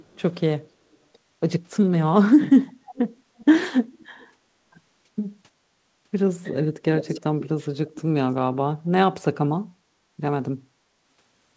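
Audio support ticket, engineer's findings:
Echo leak: delayed copy of the speech, about 309 ms behind, at 0.0–0.22, 0.93–0.97, 2.67–3.45, 3.99–4.27, 6.97–7.48 and 7.93–8.02 s. Likely the far-end echo canceller letting loudspeaker pickup through. It's loudest around 7 s.

Background gated by the echo canceller: room tone ducks about 9 dB, briefly, between 9.89 and 10.1 s. The canceller clamps the mic while the speaker plays, then releases.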